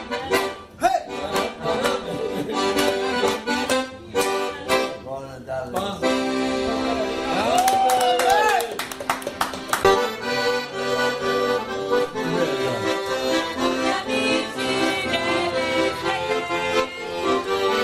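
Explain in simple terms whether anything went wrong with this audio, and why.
At 2.03 s there is a skip ahead. About half a second of sound is missing, and playback jumps straight to later audio without a pause.

From 3.17 to 3.66 s comes a jitter buffer speed-up. Tiny slices were cut to shrink the delay, so the sound runs about 6% faster at the same pitch.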